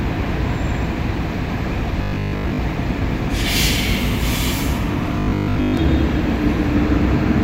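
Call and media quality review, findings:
Robotic sound from repeated short buffers, 2.03–2.61 s and 5.19–5.77 s: rigid metallic buzz at 50 Hz replacing most of the audio. Likely a starved jitter buffer looping the last 20 ms segment while incoming audio is skipped.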